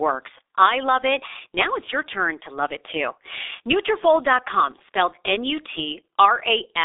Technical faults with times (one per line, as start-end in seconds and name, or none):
0.00-6.84 G.723.1 codec